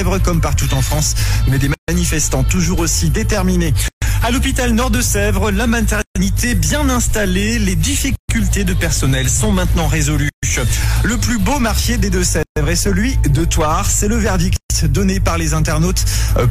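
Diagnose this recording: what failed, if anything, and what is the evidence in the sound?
The failure is at the codec stage, a gap at a join of encoded pieces. The sound drops out to silence at 1.74, 3.88, 6.02, 8.16, 10.29, 12.43 and 14.56 s. The first gap is 142 ms and the rest are 136 ms each, with edges smeared by the codec. The sound then resumes where it stopped. It looks like 2-second pieces were encoded separately and butted together untrimmed, so each join keeps the encoder's start delay and last-frame padding.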